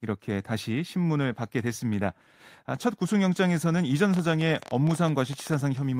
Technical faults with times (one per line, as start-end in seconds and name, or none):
4.14-5.55 train of clicks